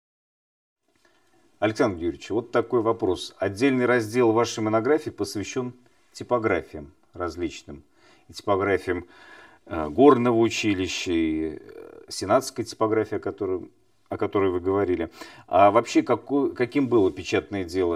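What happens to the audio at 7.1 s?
At 7.1 s, as throughout the speech, channel delay (comb filtering) is present: one channel lags about 3 ms, so the mono sum notches from roughly 150 Hz upward, sounding hollow.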